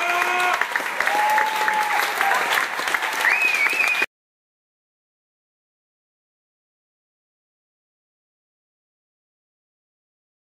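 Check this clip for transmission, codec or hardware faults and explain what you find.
Nothing here points to any transmission, codec or hardware trouble; the audio stays steady and intact all the way along.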